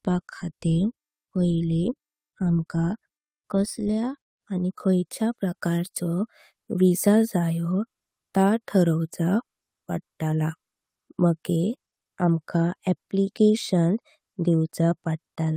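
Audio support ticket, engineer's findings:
Brief roughness at 4.59–4.61 s in the speech, about 20 ms: lost packet rebuilt from error correction, fits a single dropped Opus packet replayed from the next packet's low-bitrate FEC copy, so no gap, just grainier.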